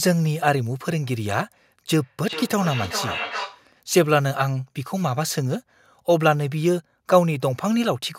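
From 1.92 to 3.69 s, the speech picks up a feedback echo between two devices. Each phrase returns after a fixed delay of roughly 400 ms. The repeats sound thinner and more ringing than the original. At their loudest they sit about 9 dB below the direct speech. The cause is two devices sharing one call in the same room. One plays what the other's microphone sent, and that microphone captures it again. Each echo canceller only removes its own device's playback, so the loop goes unchecked.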